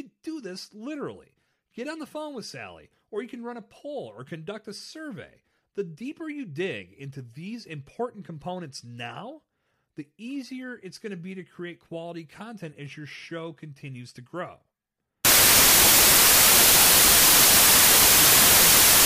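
Samples built from the wrong bytes take over from 15.25 s to the end of the speech clip at 19.06 s. From that point the reader assembles each sample from mismatched bytes, whether shifted by one, swapped in order or misaligned, so the rapidly fluctuating low-order bits land in the most significant position. The result is a burst of loud, harsh broadband noise.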